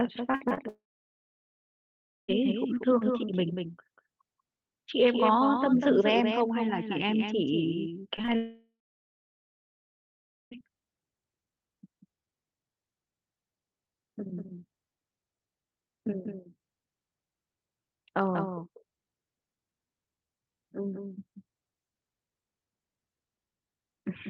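It's a speech recording, and the whole thing carries a doubled audio track. A second full-band copy of the voice trails the original by around a fifth of a second, at about 5 dB quieter. There's no reverb tail or room colour on it, just a clean slapback, which most likely comes from the signal being picked up twice, once through a slower path. Right at the start, from 0.31 to 0.59 s, there's repeated packet loss giving that robotic, choppy texture: four separate holes, the longest about 52 ms, each patched by stretching the last bit of sound. Roughly 42% of that short span is concealment rather than real audio, so it comes out choppy with bits chewed off. Straight after, from 0.69 to 2.30 s, there's a long network dropout, likely a network stall. The last sound gets smeared on briefly as a fading buzz, then nearly 1.5 s of silence before the speech returns with that section simply gone. 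Around 8.2 s you get a cluster of short concealed packet loss, at 8.16 to 8.30 s, 8.21 to 8.25 s and 8.25 to 8.29 s. Each loses about 20 ms and gets filled by extending the preceding sound and blending back, with the first adding about 4 ms of timing slip. It reads as a quick smear or wobble, and a consonant could drop out. Right after that, from 8.36 to 10.57 s, comes a second long network dropout, again likely a network stall, with a short fading tail and then about 1.8 s of silence before the audio picks up again minus the lost part.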